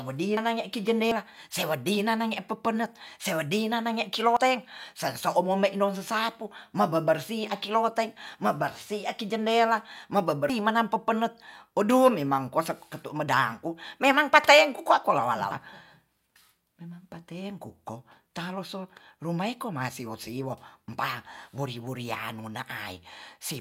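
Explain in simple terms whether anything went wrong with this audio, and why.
Five small jumps in the speech, at 0.37, 1.12, 4.37, 10.50 and 15.51 s, are likely dropped buffers (overrun): roughly a tenth of a second lost each time, about a fifth at 10.50 s.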